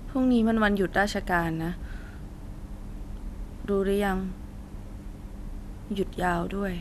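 No technical faults are audible.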